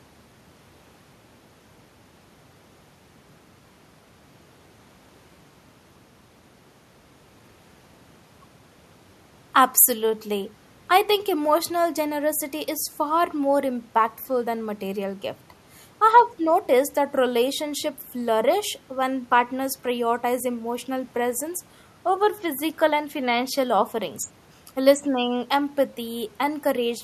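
No technical faults are audible anywhere in this speech recording.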